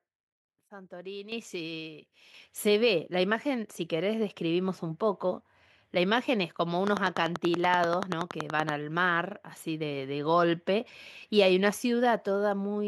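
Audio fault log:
1.32 s and 2.34 s, microphone volume stepped up: the speech and the background noise jump together in a single step, by about 10 dB at the first point and about 6 dB at the second. This comes from the call software judging the input too quiet and raising the device's input volume.
6.87–8.70 s, train of clicks: an evenly spaced ticking of around twenty similar clicks, about 10.5 per second, rises well above the speech, roughly 15 dB over it, and carries on through pauses. The likely cause is interference from nearby equipment or a faulty connection or power supply.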